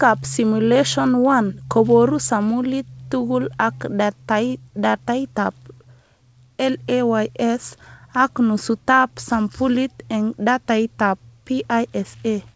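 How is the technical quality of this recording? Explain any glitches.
No glitches can be heard in the speech, which has gone through a call path whose wideband coding leaves nothing above 8 kHz, consistent with a G.722 codec at 64 kbps.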